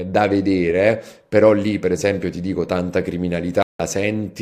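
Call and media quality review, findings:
Corrupt frame muted, speech, 3.55 to 3.80 s: abrupt 0.25 s hole of digital silence, consistent with the decoder rejecting bit-damaged compressed frames (a span that fits about three frames) and the player muting them. Distinguishing features: hard onset with no fade, no concealment fill or smeared repeat as with packet loss concealment, and timing intact, so the speech after resumes on schedule, unlike a buffer underrun. Component: decoder error handling on the receive side.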